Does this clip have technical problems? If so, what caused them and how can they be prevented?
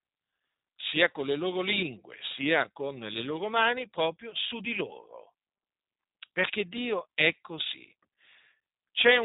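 Yes, the whole clip has G.729 codec damage: nothing above 3.8 kHz, and a rough, synthetic edge from rebuilding speech out of pulses, which suggests roughly 8 kbit/s. Use a wideband codec like Opus or G.722 end to end.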